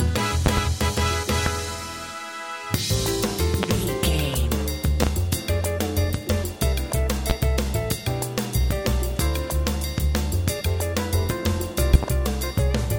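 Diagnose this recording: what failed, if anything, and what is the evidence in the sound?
Loud pops, likely from the analogue wiring (a plug, switch or static discharge): double pops at 0.46–0.60, 5.03–5.10 and 11.94–12.06 s, single ones at 1.46–1.49, 3.63–3.66 and 7.30–7.33 s. Each peaks about 20 dB above the signal, with the sound continuing underneath. On a waveform they are tall spikes. On a spectrogram they are full-height vertical lines.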